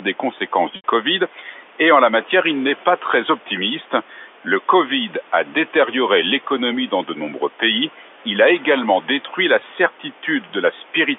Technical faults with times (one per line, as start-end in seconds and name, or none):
0.00-11.18 noise suppressor artifacts
0.76-0.84 packet loss with pitch repetition
1.33-1.61 speech cut by the noise suppressor
4.10-4.25 speech cut by the noise suppressor
9.27-9.38 speech cut by the noise suppressor